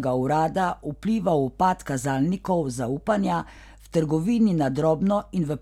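No faults were found anywhere in the recording, from the first sample to the last.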